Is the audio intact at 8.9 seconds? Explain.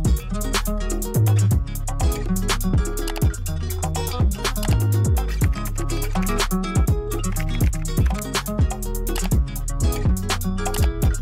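Yes, at 8.9 seconds the audio is intact, with no dropout, click, distortion or other fault to be heard at that moment.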